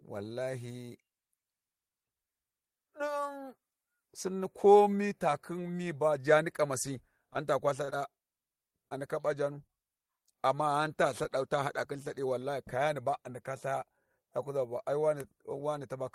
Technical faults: short concealed packet loss; short stall from a late packet

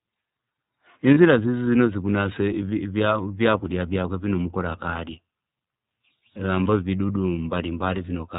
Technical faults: iLBC codec; lost iLBC frames

